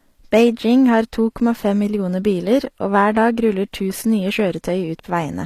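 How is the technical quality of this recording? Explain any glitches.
The technical quality is compromised by plainly audible codec damage across the whole recording, most likely HE-AAC compression at a low bitrate, consistent with something near 24 kbps. Only the lower spectrum is coded directly. The treble is rebuilt by copying lower bands upward under a coarse envelope, so its harmonics don't align with the real ones. The s sounds come out gritty, metallic or lispy. On a spectrogram, the upper region looks smeared and repeated, ending sharply at 14.9 kHz with nothing above.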